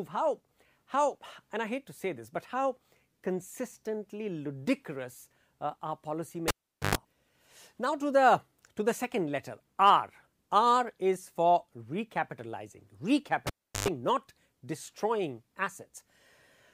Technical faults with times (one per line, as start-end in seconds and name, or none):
6.48-6.95 cable pulled and plugged in
13.47-13.88 cable pulled and plugged in